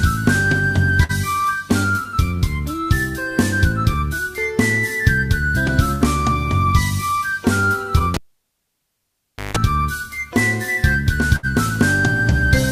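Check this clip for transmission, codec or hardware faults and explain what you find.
Two kinds of fault are present: three bursts of packet loss and one cable pull-and-reinsert.

Burst of packet loss at 1.03–1.12 s, 5.95–6.04 s and 11.36–11.46 s. Each time about 60 ms of audio never arrived. The receiver extended the last sound for 55 to 70 ms, fading it into a held buzz or hiss, then resumed with that stretch missing.

Cable pulled and plugged in, from 8.14 to 9.57 s. A pop marks the disconnection, followed by about 1.38 s of near silence. As the plug goes back in, the tip touches first and picks up about 0.17 s of 50 Hz mains buzz, and a second pop comes as the signal returns.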